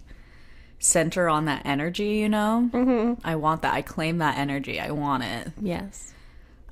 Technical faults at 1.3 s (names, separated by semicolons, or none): none